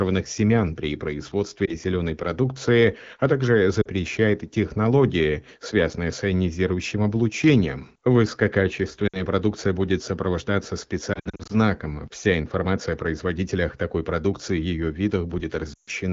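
Lost AMR speech frames at 1.66 s (just before "зеленой продукции а также"), 3.82 s (just after it), 9.07 s, 11.14 to 11.52 s (after "продукция будет сопровождаться", scattered gaps) and 15.73 s. In each, the decoder repeats the last good pitch and vocal tract settings at falling gain. The sound becomes a brief dip or warble, or drops to near silence within two frames. On a spectrogram this shows as frozen, flattened harmonics that dim, and on the waveform as a shrinking envelope.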